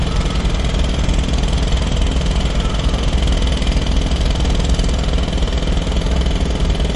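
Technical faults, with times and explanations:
Throughout, MP3 compression: nothing is present above 11.2 kHz, and the remaining sound has a plainly audible watery, swirling quality with smeared attacks, likely from MP3 encoding at a low bitrate, in line with roughly 47 kbps. Short of bits, the encoder drops the top band and zeroes weak frequency lines, which flicker on and off between frames. A spectrogram shows a hard ceiling at 11.2 kHz and patchy, speckled holes below it. On the waveform, transients look softened.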